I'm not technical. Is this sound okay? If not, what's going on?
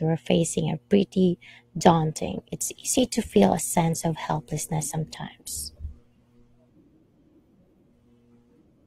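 No. From 1.74 s to the end, an adaptive stream at a lower bitrate took over: the speech suddenly picks up more compression artefacts, without any gap.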